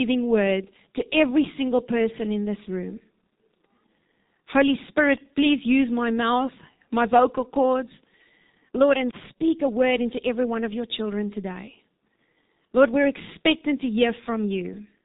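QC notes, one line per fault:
Throughout, G.723.1 codec: speech sounds muffled and hoarse, with nothing above about 3.8 kHz, consistent with a roughly 6.3 kbit/s low-rate telephony coder.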